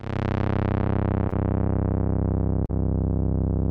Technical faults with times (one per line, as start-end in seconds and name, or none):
1.29-1.34 short concealed packet loss
2.66-2.71 short concealed packet loss